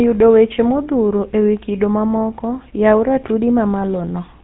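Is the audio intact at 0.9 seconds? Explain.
No. At 0.9 seconds, as throughout the clip, the speech has a buzzy, gravelly roughness and a dull top end, with nothing reaching above about 3.9 kHz. This is GSM full-rate codec damage, and it is plainly audible. The codec rebuilds speech from a vocal-tract model excited by evenly spaced pulses that keep only a fraction of the original excitation detail. That coarse excitation causes the grit, consistent with a low rate around 13 kbps.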